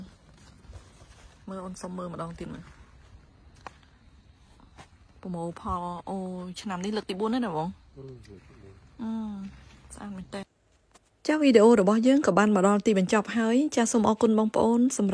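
No technical faults can be heard anywhere in the clip.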